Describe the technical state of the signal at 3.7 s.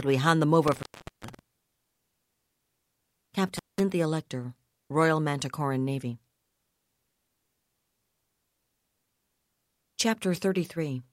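An intermittent contact is interrupting the signal at 3.7 s. It runs from 3.57 to 3.80 s. A loose cable or plug opens for about 190 ms. The speech drops out, with crackle at each edge and faint hiss in the gap.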